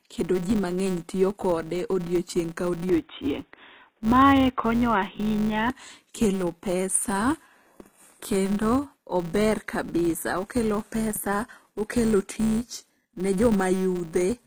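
Throughout the speech, sibilants sound gritty and metallic. The likely cause is HE-AAC compression at a low bitrate, around 20 kbps.

A steady 188 Hz buzz runs under the whole clip and rises and falls with the level. That points to a filter restarted on every block, fitting a 256-sample block.

From 2.89 s, just before "kelo pesa", to 5.7 s, the sound turns dull and boxy, and a faint new noise appears. The input likely switched to a poorer device.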